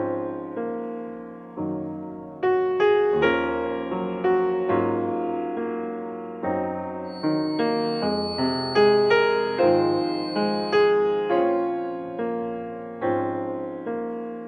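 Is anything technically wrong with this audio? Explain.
Yes. From 7.03 to 10.96 s a feedback whistle sits behind the sound: a thin, steady tone at 4.4 kHz, somewhere around 15 dB below the main signal, swelling and fading slowly in level. The likely cause is a loudspeaker-to-microphone loop balanced right at the edge of feedback, so one frequency keeps ringing without building up. A spectrogram would show it as a narrow horizontal line at 4.4 kHz across that span; the waveform would barely change.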